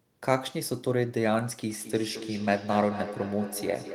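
From 1.7 s, feedback echo between two devices loops speech back about 10 dB down every fifth of a second, showing as spaced ghost copies.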